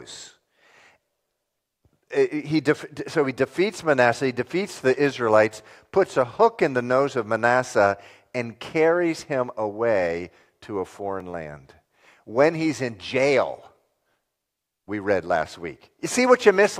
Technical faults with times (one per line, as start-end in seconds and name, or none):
none